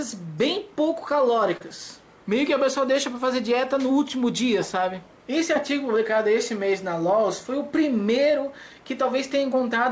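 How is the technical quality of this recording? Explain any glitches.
The recording has one audible glitch, heard against the call path's band limit: nothing sounds above 8 kHz, consistent with a G.722 wideband codec.

Short concealed packet loss, 1.57 to 1.64 s: about 30 ms of audio never reached the decoder in time. The receiver bridged the hole with 36 ms of synthetic sound extended from what came just before, then blended back into the real signal, trimming 6 ms. It comes across as a brief smear or wobble where the sound briefly loses definition.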